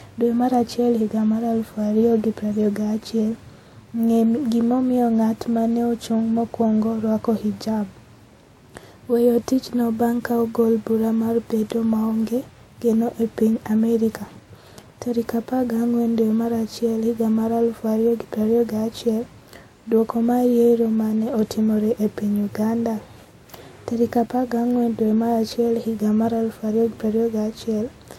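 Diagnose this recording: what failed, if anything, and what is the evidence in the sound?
The speech carries two layers of coding damage at once: the artefacts of two different codecs heard together, and nothing at all above about 16.7 kHz for the full clip. That points to transcoding between lossy codecs at the codec stage, likely a WMA-type encode later re-encoded to Vorbis. The second encoder spent bits preserving the first one's artefacts and added its own, and the lowest band limit in the chain survives.

Two isolated bit error spikes appear as sharp, bright ticks that have nothing to do with the speech around them. The first is at 11.70 s, right before "maonge geno", and sounds like a short run of two or three corrupted samples. The second is at 24.71 s and is a single-sample tick. Each is a flipped bit in storage or on a digital link: the sample value jumps by a power of two and snaps straight back, spraying broadband energy.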